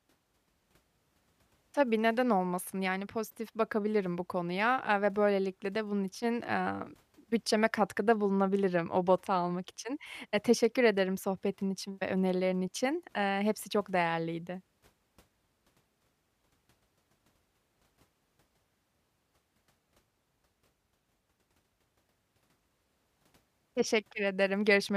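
Nothing technical stands out in this recording of speech; there's no fault to point to anywhere in it.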